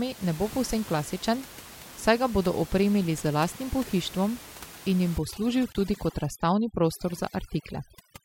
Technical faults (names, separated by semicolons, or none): overdone noise removal; gap at a join of encoded pieces